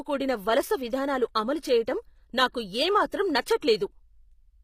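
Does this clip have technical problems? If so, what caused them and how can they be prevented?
Yes. Throughout the speech, the treble sounds synthetic, and s sounds come out gritty and metallic. Nothing is present above 15.5 kHz. This is plainly audible HE-AAC compression, likely HE-AAC v2 at a low bitrate that fits about 24 kbps. The codec keeps only the lower spectrum and rebuilds the top by copying lower bands upward under a coarse envelope. The copied harmonics do not match the real ones, which causes the grit. To prevent it, encode at a higher bitrate with plain AAC, or keep a lossless master.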